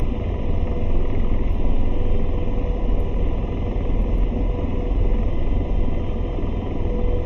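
From start to finish, one channel arrives about 0.3 ms late and the two are summed to mono. This channel delay produces comb filtering, cancelling shared content at evenly spaced frequencies from around 1.5 kHz upward, so the sound is hollow and phasey.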